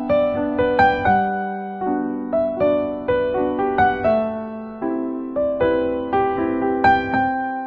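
No technical faults can be heard anywhere in the recording, and the signal holds steady throughout.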